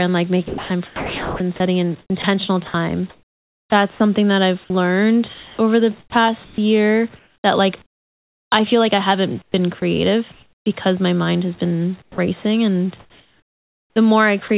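From 0.48 to 8.52 s, after "and like", the speech is chopped by the voice detector. It likely kept switching transmission off, so about 3.1 s became comfort noise.

From 9.42 to 10.66 s, after "I feel like I", comfort noise replaces the background. The real room sound likely gave way to a smoother synthetic noise.

At 9.8 s and from 12.02 to 12.18 s, after "my mind has been", the voice detector drops sound. Speech likely cuts briefly to steady noise or near silence.

From 13.0 to 14.5 s, the chopping returns, with about 1 s likely swapped for comfort noise.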